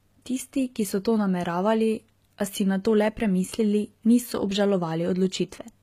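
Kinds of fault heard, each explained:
HE-AAC compression: The damage is plainly audible throughout, and nothing makes it above about 14.9 kHz. That points, likely, to HE-AAC at a low rate, something like 20 kbps. The codec keeps only the lower spectrum and fakes the treble by copying lower bands upward under a coarse envelope. The top end stays bright but isn't the real thing, so its harmonics don't line up with the ones below, and sibilants come out gritty or lispy.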